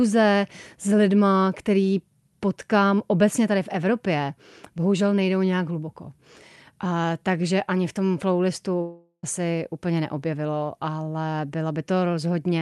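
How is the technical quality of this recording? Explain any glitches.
The recording has one clear glitch, a long network dropout; the rest of the audio carries the coding character of a call link, band-limited at about 12 kHz, which fits Opus at around 64 kbps.

From 8.81 s to 9.25 s, right after "ani v tom flowlistu", audio likely stopped arriving over the network. About 420 ms of speech is lost. The receiver stretched the last sound into a fading buzz for roughly 0.4 s, leaving about 60 ms of near-silence before speech resumes at "asi úplně neobjevilo ale", with the lost part simply missing.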